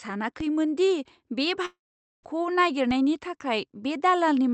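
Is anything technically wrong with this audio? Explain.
Yes, there are two kinds of fault in this speech.

DC steps occur at 0.40 s and again at 2.91 s. At each point the waveform's zero line suddenly jumps to a new offset, as happens when a converter recalibrates or an offset-carrying input is switched in. The shift then drains away slowly, as a high-pass filter near 2 Hz would pull it back. You hear each one as a brief low thump or click, while the speech carries on unaltered.

A long network dropout, the likely cause of the break from 1.65 s to 2.25 s, stops incoming audio for about 0.58 s. The receiver tries to bridge the gap by stretching the last received sound, so a fading buzzy or hissy tail appears. Roughly the final 0.46 s becomes silence before the speech resumes, with that stretch of speech simply gone. The Opus call path limits the bandwidth to 8 kHz throughout.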